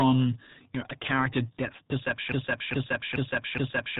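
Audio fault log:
throughout: RealAudio 14.4 codec. Nothing above 3.9 kHz survives, and speech turns muffled and gargly, unlike a clean low-pass; the heavy smearing fits an 8 kbit/s dial-up speech codec.
2.32 s to end: broken-record loop. A 0.42 s fragment repeats identically four times, back to back with no decay, unlike an echo; likely a stalled stream resending its last buffer, losing the audio underneath.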